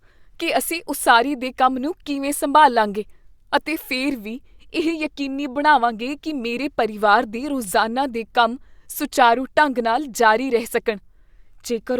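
No technical faults can be heard anywhere in this speech recording. Nothing in the signal points to a problem in how it was captured, processed or delivered.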